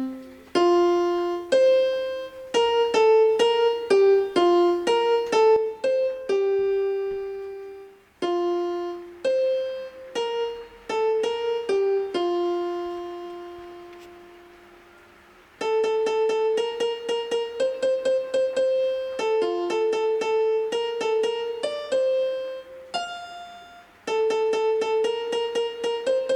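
At about 5.56 s the sound abruptly drops by about 6 dB and stays down right through to the end of the clip. It's a clean step rather than a fade, and whatever sat in the middle just sounds quieter from there on. That behaviour points to a likely case of one channel dropping out: once one side of the stereo pair goes dead and the two are summed to mono, the shared material loses half its contribution, and anything that lived only on the missing side is simply gone.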